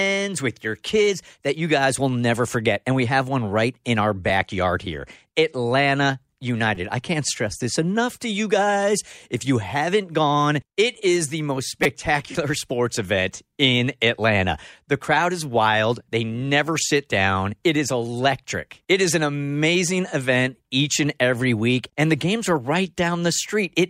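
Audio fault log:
6.75 s, repeated buffer: just before "I can't stress this", audio arrived late and a piece of about 5 ms, fitting a 256-sample buffer, replayed with hard joins, heard as a click.
11.84–11.86 s, repeated buffer: after "it is the most", the same short piece replayed several times back to back, giving a brief buzzy stutter.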